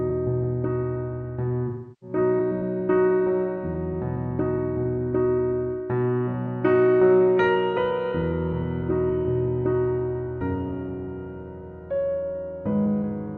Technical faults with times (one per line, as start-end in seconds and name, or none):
1.67-2.16 AAC frame loss with concealment